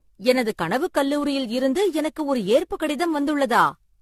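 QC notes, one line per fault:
throughout: generation loss. Swirly, hollow speech with blurred attacks and nothing above 14 kHz, far more smeared than one AAC pass near 64 kbit/s would give, likely from around ten re-encodes.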